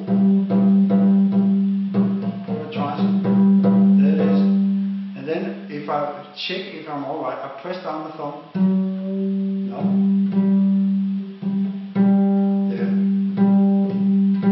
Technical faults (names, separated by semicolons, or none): none